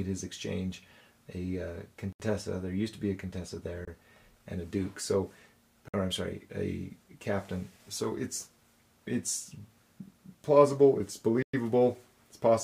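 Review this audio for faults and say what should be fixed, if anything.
The audio drops abruptly to silence four times and then resumes: at 2.13 to 2.20 s (74 ms), 3.85 to 3.88 s (25 ms), 5.88 to 5.94 s (53 ms) and 11.43 to 11.53 s (109 ms). These are likely Bluetooth stalls, where radio interference delayed packets, the headphones' buffer emptied, and playback paused until retransmissions arrived. To prevent this, keep the phone and headphones close with a clear line of sight, away from crowded 2.4 GHz sources.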